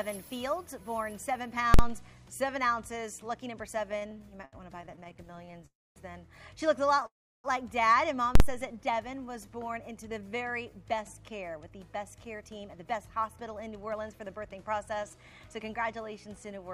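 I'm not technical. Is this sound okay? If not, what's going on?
No, there are several faults.

Invalid numbers at full scale: at 1.74 to 1.79 s and again at 8.35 to 8.40 s there is a sharp, very loud bang. A calculation went wrong and produced numbers the system couldn't use, so the output jumped to its maximum level for a short block of about 46 ms, which fits a 2048-sample processing block. Because the block is so short, each one lands as a single bang.

Repeated stalls (stutter): from 3.91 to 5.64 s the sound keeps catching and restarting, about 29 times in under two seconds, with the longest hold lasting 74 ms. Data was arriving late, so the receiving end kept running out and stretched the last bit of sound each time until more came. Nothing is lost, but roughly a fifth of that stretch is filler, so it drags and stutters.

Call audio freeze: at 5.66 to 5.98 s and 7.06 to 7.46 s the sound stops and briefly continues as a fading buzz that drops into silence, about a quarter of a second the first time and a third of a second the second time. 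The likely cause is data held up in transit, so the receiver ran dry. When the data arrived, the sound picked up where it had stopped, leaving a gap of 0.30 s and 0.38 s with nothing missing.

Jitter buffer slow-down: from 8.72 to 10.71 s the sound plays at about 90% speed while keeping the same pitch, so it sounds drawn out. The receiver was low on stored audio and built up a reserve by repeating tiny slices of sound many times over. This added about 0.2 s to that stretch.

Jitter buffer speed-up: from 12.07 s until just before the end at 16.70 s, the sound runs at about 109% speed with unchanged pitch and can feel hurried. The receiver had more audio stored than it wanted, so it kept cutting out tiny slices to catch up. In total it trimmed away somewhere around four tenths of a second.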